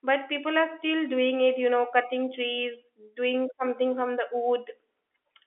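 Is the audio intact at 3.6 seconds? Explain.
Yes, the audio is intact at 3.6 seconds, with the speech passing cleanly through its G.711 telephone coding, which holds the sound to the narrow telephone band with nothing above about 3.8 kHz.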